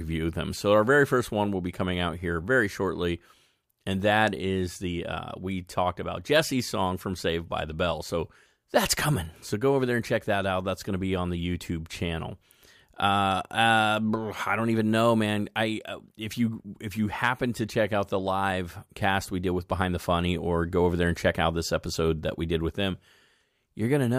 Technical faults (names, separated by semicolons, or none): none